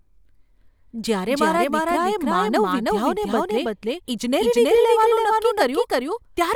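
A doubled audio track runs through the whole recording: every sound returns about 300 ms later at roughly equal loudness, with no decay or room colour. The likely cause is the same speech being captured twice, once by a slower path, and mixed together.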